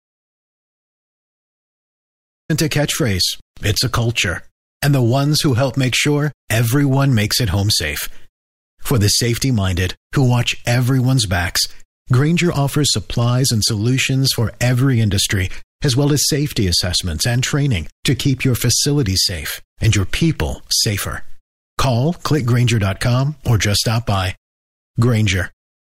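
From the start until 2.50 s the speech is missing in an audio dropout to silence: plain silence, no room tone, then an abrupt entry at "a catchphrase it's a". A likely lost input or mute explains it; a natural pause would keep background hiss.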